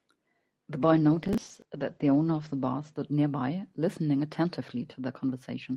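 Speech in this clip turns coarse and muffled from 0.8 to 2.99 s, a call bitrate drop where the encoder falls from 32 to 12 kbps and the audio bandwidth narrows from 12 kHz to 8 kHz. Between 1.23 and 1.65 s a gritty crackle rides on top. That is processor overload crackle: about twenty 10 ms buffers miss their deadlines, and each replays stale audio with hard edges.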